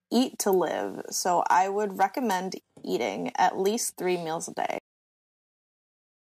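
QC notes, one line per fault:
2.48–4.54 s, channel delay (comb filtering): after "live so I would", one channel lags the other by roughly a sample, about 0.02 ms, and the mono sum cancels what is common to both at evenly spaced frequencies. The first notch falls near 20 kHz, so the speech loses only its extreme top-end air.
4.78 s, cut-off end: the speech stops mid-sound and drops straight to digital silence with no decay, holding silent to the end of the clip. The final buffers were never written or played back, so the signal is truncated rather than faded.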